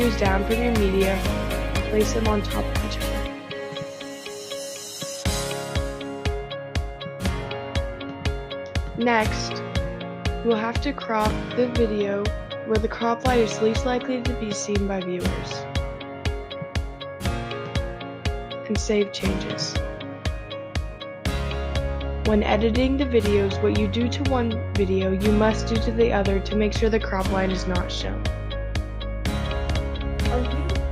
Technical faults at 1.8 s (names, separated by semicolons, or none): none